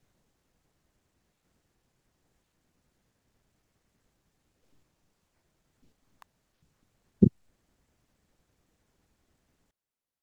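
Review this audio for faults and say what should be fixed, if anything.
An electrical switching spike at 6.22 s is a sharp snap in the speech, very brief and fairly quiet, peaking at about -35 dBFS. It sits on top of the speech rather than replacing it, which points to interference coupling into the line. The likely cause is a nearby switch, motor or static discharge whose short arc was picked up by the audio cabling. To prevent it, use balanced, well-shielded cables kept away from mains switches and motors.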